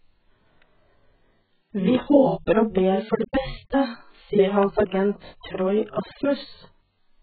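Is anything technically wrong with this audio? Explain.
Yes, there are two problems. The whole clip shows AAC compression damage. This speech has nothing at all above 4.5 kHz, and the damage is heavy throughout. It's likely AAC-LC at a very low rate, which fits something around 8 kbps. At that rate the encoder pulls its cut-off right down and starves the remaining bands of bits, so the speech comes out dull and smeared, with a warbly, fizzy texture on sustained sounds and sibilants.

There are also loud pops. The first is a single pop from 1.95 to 1.97 s, just before "håper og ber for". The second event runs from 4.63 to 4.82 s, right after "for det beste sier", and it's two pops in quick succession. Both sit roughly 15 dB above the speech. They're likely sudden voltage steps or pulses, from something like a plug, a switch, static or a driver glitch, added straight onto the signal. You hear a sharp pop or thump while the speech carries on underneath.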